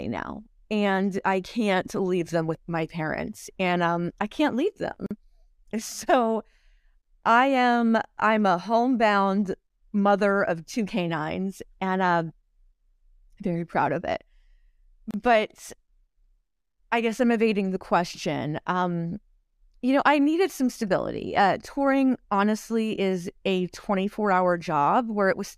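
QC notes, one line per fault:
5.06 s and 15.11 s, gap at a join of encoded pieces: continuous speech drops out for about 44 ms right after "um I can't leave" and for 31 ms at 15.11 s, with edges smeared by the codec, and the speech resumes exactly where it stopped. The gaps fall 10 s apart, which points to 10-second pieces encoded separately and joined without trimming. Each piece's leading encoder-delay silence and padded final frame were kept at the seam.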